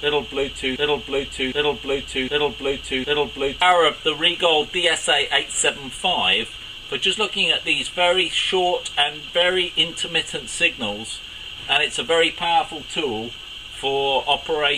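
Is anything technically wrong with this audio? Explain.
Yes. From 0.76 s to about 3.62 s the audio turns into a broken-record loop: the same 0.76 s fragment plays four times back to back, each pass an exact copy with no change between them. Whatever should have been heard in that span is simply missing. The likely cause is a stall in the player, encoder or stream, which kept resending the last fragment it held until fresh data arrived and normal playback resumed.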